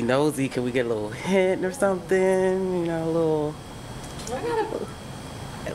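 No faults are present anywhere in the clip.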